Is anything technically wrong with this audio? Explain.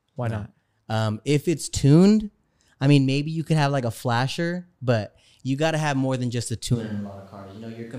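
Yes. At 6.76 s, just after "more than just a", the speech suddenly turns roomy and hollow, loses bass and drops by roughly 10 dB. Room noise rises to about 30 dB below the speech. This is likely a switch to a distant microphone, after the close one failed. It lasts to the end.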